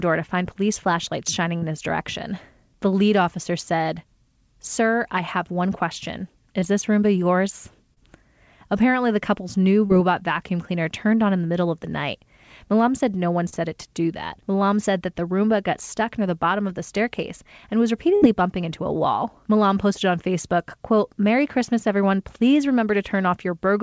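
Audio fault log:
1.58–1.64 s, 6.60–6.64 s, 7.94–8.01 s, 9.86–9.91 s, 13.49–13.54 s: short concealed packet loss. At each point, 20 to 40 ms of audio arrived too late and was patched by continuing the preceding sound. On a spectrogram this shows as a brief smeared patch with blurred harmonics. Examples follow "find police flashlights shining" and "the couple's new".
18.16–18.24 s: burst of packet loss. About 60 ms went missing. The last sound was held and faded, leaving a decaying band on the spectrogram and a shrinking waveform before the audio resumes further on.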